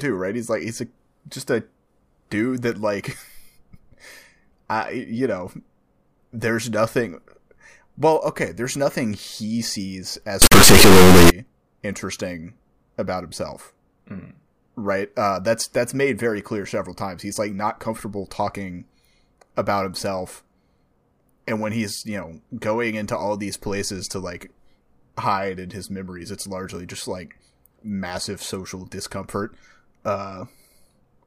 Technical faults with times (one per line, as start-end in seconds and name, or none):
10.42-11.30 integer read as float